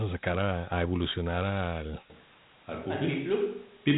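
Dialogic VOX ADPCM coding runs through the whole clip. The audio stops at about 3.9 kHz, which points to 8,000 samples a second stored as 4-bit adaptive differential steps, around 32 kbps. Each sample encodes only the change from the last, with a step size that keeps adapting, so the coarse quantisation leaves a plainly audible gritty hiss that rides along with the speech and gives it a rough, narrow telephone quality.

A switch to a distant microphone comes at 2.10 s, right after "sacar a evolucionar al", and lasts to the end. The speech abruptly turns roomy and hollow, loses its low end, and drops by about 5 dB, while background noise rises to roughly 30 dB below the speech. The likely cause is that the close microphone's signal dropped out and a farther pickup took over.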